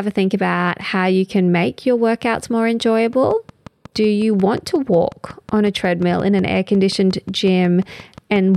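From 3.13 s to 8.56 s a steady ticking sits over the speech and its pauses: about 5.5 evenly spaced clicks per second, some thirty in all, roughly as loud as the speech. This train of clicks likely comes from interference from nearby equipment or a faulty connection or power supply.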